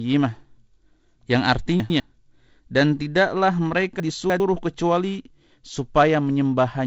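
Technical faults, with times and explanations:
1.8–2.0 s and 4.0–4.4 s, chunks out of order: short blocks of about 100 ms play in the wrong sequence, so the audio jumps forward and then back at hard joins. The first jumble is a single swapped pair. The second, just after "dan tidaklah", is longer, which fits one chunk landing three places late. Nothing is lost, only reordered. The wideband telephone coding, band-limited near 7.7 kHz, does only light damage.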